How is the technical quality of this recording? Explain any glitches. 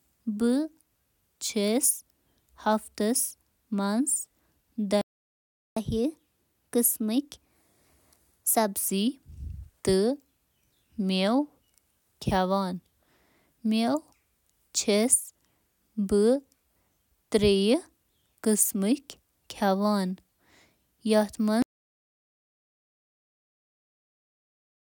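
The recording has three glitches: a stall, a sped-up recovery, and a final cutout.

At 5.01 s a playback stall, likely from the player running out of data, leaves the speech silent for about 0.75 s before it resumes.

From 5.77 to 8.77 s the player plays catch-up at higher speed, resampling at 1.1x to recover lost time, so speech sounds hurried and roughly a semitone and a half higher.

From 21.62 s to the end there is an audio dropout to silence. The input was likely lost while recording continued, leaving dead digital silence with no room tone.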